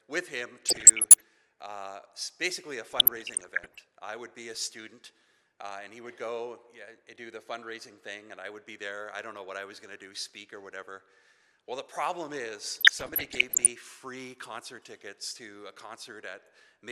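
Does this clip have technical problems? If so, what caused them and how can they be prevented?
Yes, DAB burbling at 0.66–1.21 s, 2.89–3.84 s and 12.70–13.71 s: weak reception let around 0.7 to 1 percent bit errors corrupt MP2 sub-band samples, giving short blips of noise. Better antenna placement or a stronger multiplex signal would prevent it.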